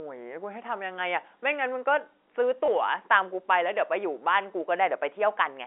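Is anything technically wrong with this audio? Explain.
Yes, there is one brief fault. From 2.66 to 2.68 s there is packet loss with the last packet repeated: about 20 ms of audio is missing, which fits a single lost packet, and the receiver fills the gap by replaying the preceding packet. The repeat is heard as a small blip. The audio sits within the expected telephone band of roughly 300 Hz to 3.5 kHz.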